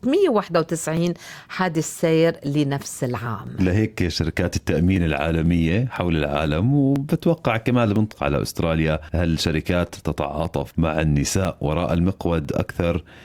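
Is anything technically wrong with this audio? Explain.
Yes, there are two faults.

Periodic USB or driver dropouts: from 0.47 s to 12.95 s, about 1 ms of audio is skipped every 0.5 s, giving regular ticks while there is signal.

Stream segment skipped: at 8.11–8.15 s the sound jumps abruptly ahead with a small blip, likely because a stream segment failed to load and playback continued with the next one.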